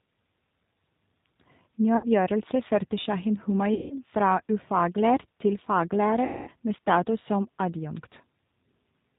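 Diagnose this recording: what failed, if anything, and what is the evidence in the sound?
Speech sounds rough, slightly synthetic and dull with nothing above 4 kHz throughout. This is the G.729 codec at 8 kbit/s, rebuilding speech from a filter, pitch predictor and sparse pulses.

At 1.97–2.07, 3.74–3.96 and 6.25–6.50 s, speech smears into a fading buzz. This is network packet loss concealed by the speech codec, which extrapolated over 60, 160 and 220 ms gaps.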